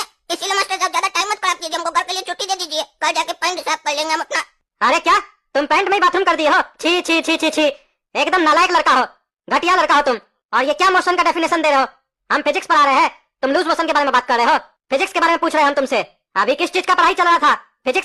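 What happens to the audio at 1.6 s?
Nothing goes wrong at 1.6 s; the audio plays through that moment intact, with no dropout, click or distortion to be heard.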